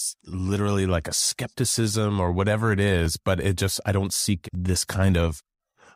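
Two devices likely running on separate clocks, drifting apart by roughly 700 ppm, cause clock drift buffer slips: about every 1.49 s, from 1.56 s to 4.55 s, a short block of around fifty samples is dropped or repeated, heard as three regular clicks in the speech.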